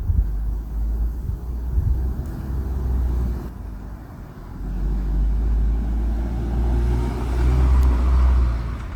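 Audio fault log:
3.49–8.95 s, one channel drops out: one side of the stereo feed likely stops delivering signal at 3.49 s and stays silent to the end. When the pair is summed to mono, everything the two channels shared loses half its contribution, so the sound falls abruptly by about 6 dB, and anything that lived only in the missing side vanishes. The result is a sudden, sustained quietening.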